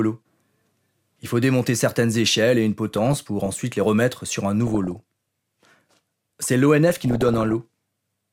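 Speech with DAB burbling at 2.92–3.46 s (after "certaines échelles et une"), 4.67–5.00 s (after "les remettre sur un") and 6.89–7.53 s. It has noise blips and level jumps in single sub-bands rather than dropouts, because residual bit errors of around 0.4 to 1 percent corrupt MP2 sub-band levels frame by frame.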